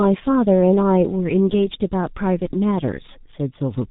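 G.723.1 codec damage runs throughout: the speech is muffled above 4 kHz, hoarse, and consonants blur, as the slow voice model fits a rate near 6 kbit/s.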